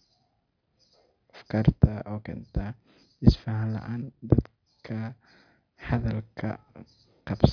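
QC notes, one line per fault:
No technical faults were found in the signal, which holds steady and continuous on every pass without any disturbance to report.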